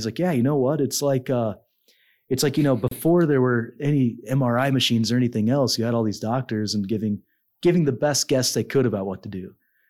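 At 2.88 to 2.91 s, right after "it's like you know" and before "there were any", the speech drops out for about 31 ms: a gap at a join of encoded pieces. The two segments were encoded separately and butted together, so one's padded final frame and the next one's start-up delay both left silence. It sounds like a brief break in continuous speech. On a spectrogram it is a vertical blank band with smeared edges; the waveform flatlines with softened edges.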